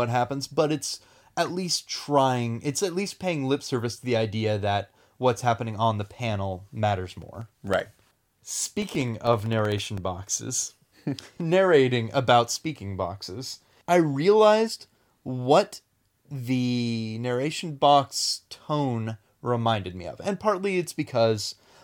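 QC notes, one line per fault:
7.10–10.04 s, periodic USB or driver dropouts: right after "happening on the panel", the audio driver stalls every 64 ms, dropping roughly a millisecond to silence, about fifty evenly spaced ticks. Waveform: brief flat gaps. Spectrogram: thin regular vertical broadband stripes.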